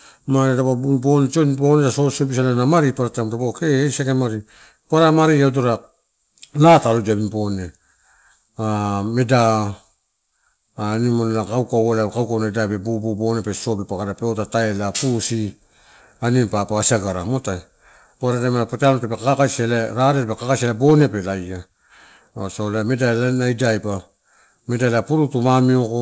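A speech recording carried over a WebRTC call path, with the band ending at 8 kHz as a wideband codec such as G.722 would leave it, and no technical faults can be heard anywhere in it.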